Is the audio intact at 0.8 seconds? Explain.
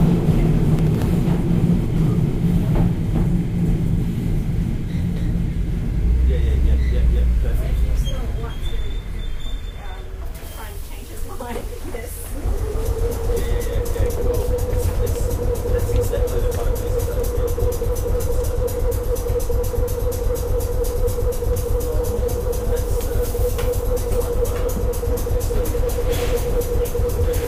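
No. From 0.79 to 1.06 s a short burst of gritty crackle tears across the sound, a handful of tiny hard-edged dropouts packed close together. This is processor overload crackle: the processor falls behind and misses several buffer deadlines over a short stretch, roughly five of them, each leaving a brief stretch of silence with abrupt edges. The gap sizes fit buffers of around 3 ms, and the crackle ends once the load eases.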